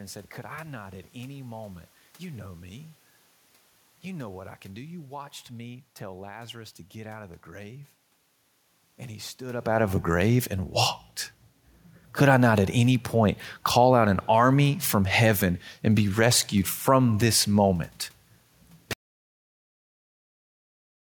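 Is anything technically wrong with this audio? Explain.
Yes. From 18.93 s to the end, the speech suffers an audio dropout to silence, likely from the input being lost while recording continued. Unlike a talker moving away, the room noise vanishes too, leaving silence for the final 2.2 s.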